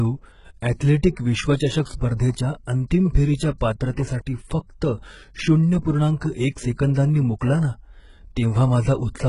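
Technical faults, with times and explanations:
Throughout, HE-AAC compression: a likely heavily squeezed encoder near 12 kbps copies lower bands upward, so misaligned treble sounds gritty and lispy, ending at 11.1 kHz.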